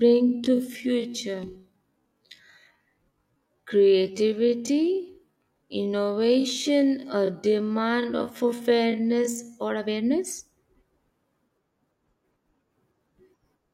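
From the start to 9.6 s the speech runs at roughly half speed (0.516x) with its pitch unchanged, so it drags, then snaps back to normal pace. That's a time-stretched section, likely software padding audio by repeating tiny slices.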